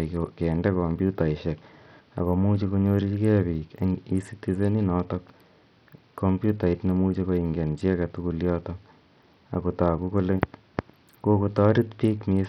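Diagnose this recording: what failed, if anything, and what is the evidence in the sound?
Bluetooth SBC compression, heard across the whole speech clip, is the likely cause at the codec stage. The top of the speech band thins out and flickers, sibilants lose their edge, and a gritty noise rides on the sound with some aliasing in the upper range. The damage is heavy, which points to a very low rate around 64 kbps. At that rate the encoder starves its weaker upper sub-bands of bits and quantises the rest coarsely.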